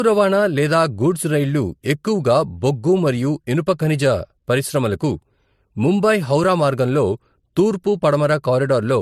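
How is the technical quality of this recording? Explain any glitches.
The recording has one fault, present for its whole length. Transcoding between lossy codecs, throughout: the speech likely passed through a low-rate MP3 stage, around 56 kbit/s, then AAC-LC near 64 kbit/s. The second encoder spent bits re-coding the first one's artefacts and added its own, so both sets of artefacts sit together, with nothing above 14.1 kHz.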